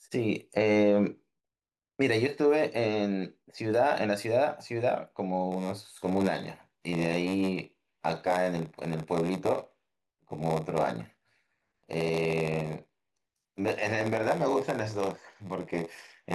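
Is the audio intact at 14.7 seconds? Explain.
No: a padded block size mismatch runs from 5.51 s to the end, zero-filling each 512-sample block, giving a 93.8 Hz buzz and speech slowed to 0.938×.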